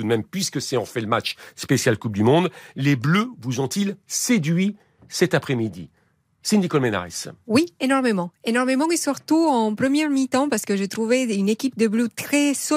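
No dropouts, clipping, glitches or other technical faults can be heard anywhere in the recording.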